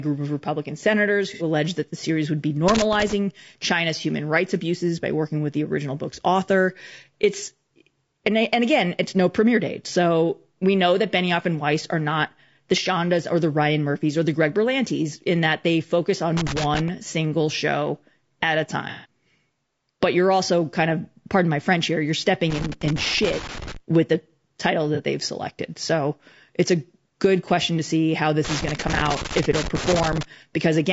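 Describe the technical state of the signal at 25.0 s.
Between 24.95 and 25.00 s, just after "with the title" and before "they've selected", the sound turns briefly smeared and noisy. This is AAC frame loss with concealment: about 30 ms of data, which fits a single lost frame, went missing, and the decoder filled the gap by reusing and scrambling the last good spectrum.

Around that moment the sound is also rough and grainy, with noise between the harmonics and a synthetic-sounding top band. The likely cause is low-delay AAC compression (AAC-ELD), whose short frames resolve pitch poorly, and the plainly audible damage points to a rate around 32 kbps.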